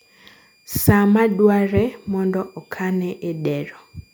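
A switching power supply in the recording chain is cycling at an audible rate, and this speech clip carries a switching supply whistle from start to finish. The converter's switching energy leaks into the audio path as a thin, high tone sitting roughly 40 dB below the speech, wandering slightly between about 2.40 and 2.42 kHz as the supply's load shifts. It rides under and between the speech as a faint whine.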